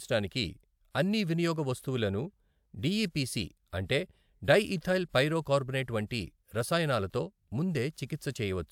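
No technical faults can be heard anywhere in the recording. The speech holds steady throughout, with nothing breaking into the sound.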